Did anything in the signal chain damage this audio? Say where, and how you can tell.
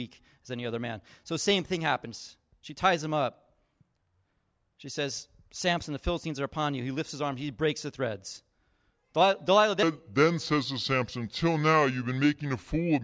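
Yes, at the playback stage, where a wrong sample rate sets in at 9.83 s and runs to the end. Speech slows to about 0.73 of its speed and drops about 5.5 semitones, which fits 22 kHz material clocked out at 16 kHz. Unlike time-stretching or pitch-shifting, tempo and pitch move together by one ratio.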